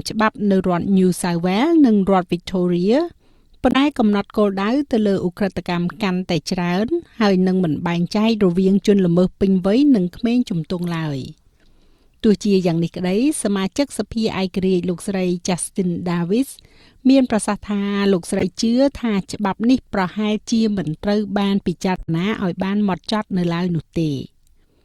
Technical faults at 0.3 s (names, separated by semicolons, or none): none